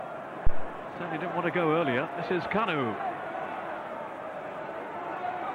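A phantom power thump hits at 0.47 s and dies away by 0.72 s. It is a deep, low thud peaking at about -11 dBFS, with a 58 ms decay. Switching the supply on a live input sent a voltage step through the coupling capacitors.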